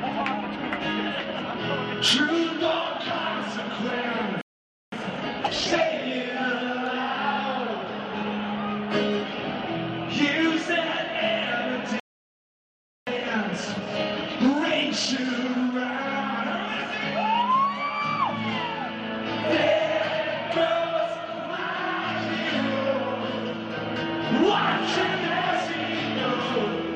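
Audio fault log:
4.41–4.92 s and 12.00–13.07 s: playback stall. Output drops to silence for about 0.51 s, then 1.07 s, likely the player running out of buffered data.
4.92–5.92 s and 13.07–16.07 s: time-compressed catch-up. Audio runs hurried at 1.5x, then 1.1x, pitch unchanged, as small pieces are cut and cross-faded to clear the backlog.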